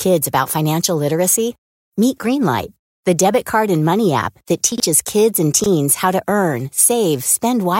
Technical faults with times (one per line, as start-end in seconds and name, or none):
4.72-4.80 chunks out of order
5.60-5.66 chunks out of order